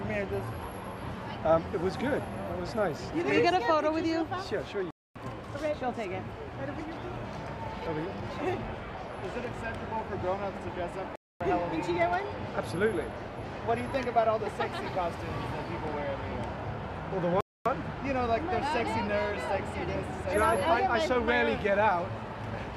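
At 4.91, 11.16 and 17.41 s, gaps between chunks insert 250 ms silences at 6-second joins: abrupt holes, flat waveform, blank spectrogram columns.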